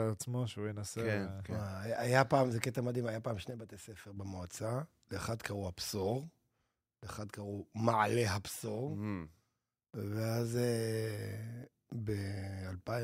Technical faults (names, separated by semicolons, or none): one channel drops out